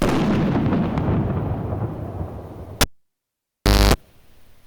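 At 2.81 s the cable is pulled and plugged in: a pop, 1.08 s of near silence that includes 0.25 s of 50 Hz mains buzz, then a second pop at 3.94 s.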